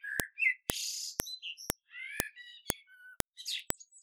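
A sharp, loud click cuts through the sound at 0.20, 0.70, 1.20, 1.70, 2.20, 2.70, 3.20 and 3.70 s. Each is a file header played as audio. The stream is built from 0.5 s pieces, and each piece still carries its WAV header. Those few dozen bytes are read as sample values. They form a brief, spiky burst unrelated to the sound. So every join snaps, at an even half-second rhythm.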